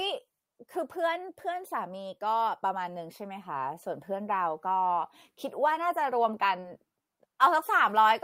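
Short concealed packet loss at about 6.59 to 6.65 s in this speech clip: roughly 40 ms of audio failed to arrive in time, and the receiver covered about 33 ms of that hole by extending the preceding sound, continuing its pitch where it was voiced or shaping noise where it was not, before crossfading back into the real signal. The result is a brief smear or wobble, and any short consonant in that span can drop out entirely. Overlapping its tail is a lost packet rebuilt from error correction, at about 6.63 to 6.65 s. Here a 20 ms stretch, which points to a single lost packet, was recovered from the low-bitrate redundant copy that Opus tucks into the following packet. That copy leaves no gap, but because it is coded so cheaply the rebuilt 20 ms sounds rougher and noisier than the audio on either side.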